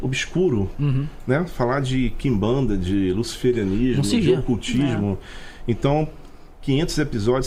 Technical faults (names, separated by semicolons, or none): none